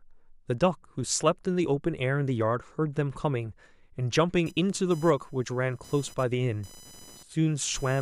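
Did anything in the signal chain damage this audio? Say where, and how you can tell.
Yes. From 4.46 s to the end, a buzzy, chirping whine pulsing at around 1 kHz sits roughly 25 dB below the speech and ignores it. That is computer activity noise in the analogue wiring: the machine's load currents disturb the shared ground the audio circuit references.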